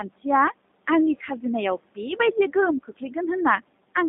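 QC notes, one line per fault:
Throughout, noise suppressor artifacts: a gate-like suppressor pulls down the bands it judges to be steady background, cutting that noise by about 18 dB in the pauses and letting it come back underneath the talker. The room noise, about 19 dB below the speech, therefore pumps in and out with each phrase.
Throughout, G.729 codec: the line runs through G.729A at 8 kbit/s, which does not send the waveform itself. It rebuilds the speech in 10 ms frames from a vocal tract filter, a pitch predictor and a handful of pulses. The band is held to roughly 200 Hz to 3.7 kHz, so the speech is narrow and telephone-like, and the coarse modelling leaves a plainly audible rough, slightly synthetic texture on the speech.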